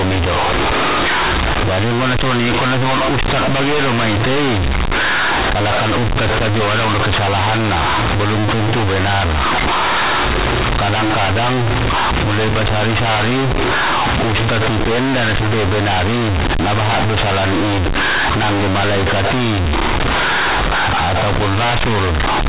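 A speech recording carried over A-law G.711 telephone coding suffers from companded audio read as linear for its entire length. The A-law bytes are being played as plain 8-bit linear samples without expansion, so every sign change throws the output across roughly half its range and quiet passages come out as loud as peaks. The result is harsh, buzzy distortion at high level, with heavy noise filling the pauses, over a band that stops at 4 kHz.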